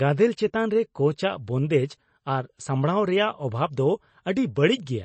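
Right from the start and all the way through, this speech has plainly audible codec damage, most likely from MP3 compression at a low bitrate, around 32 kbps by the sound of it. There's nothing above about 8.3 kHz, because the encoder cuts the top end off flat at a fixed frequency. The weak frequency detail it still keeps flickers in and out from frame to frame, so the whole thing has that watery, swirly texture.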